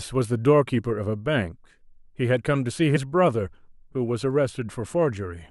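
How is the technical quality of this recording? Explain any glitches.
One glitch stands out, in the speech at 2.95 to 2.97 s: compressed frames skipped. At that point the decoder never played a couple of whole frames, either because they were missing from the stream or because it rejected them as corrupt. The audio jumps forward by around 50 ms, which fits about two frames at 23.2 ms each. At the join a sliver of the speech is simply gone.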